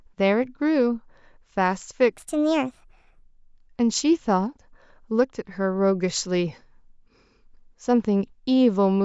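From 2.13 to 3.23 s the speech turns high and hurried, a wrong sample rate fault that fits 16 kHz audio played at 22 kHz. It runs 1.38 times fast and about 5.5 semitones up. Unlike a pitch shift, timing speeds up too.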